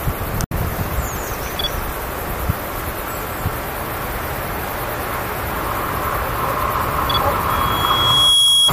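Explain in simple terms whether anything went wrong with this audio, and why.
Between 0.44 and 0.53 s the sound cuts out abruptly, then picks up further along, a gap that's likely a Bluetooth dropout, where late wireless packets got thrown away.

From 7.49 s to the end there's a loudspeaker feedback squeal: the mic hears its own speaker, and a piercing 3.3 kHz tone builds over about a second.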